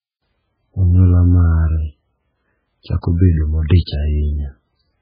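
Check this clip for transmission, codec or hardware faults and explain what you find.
One codec fault runs through the whole speech clip. Throughout, it has heavy MP3 compression, likely at a very low rate around 8 kbps: a hard ceiling at 5 kHz and watery, swirling artefacts from weak frequency lines zeroed frame to frame, unlike a clean low-pass filter.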